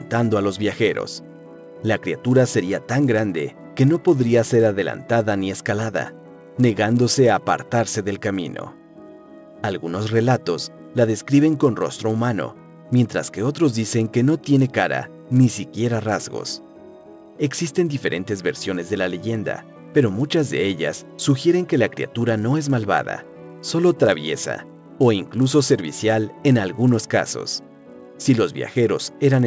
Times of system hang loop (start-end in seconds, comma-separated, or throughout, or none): none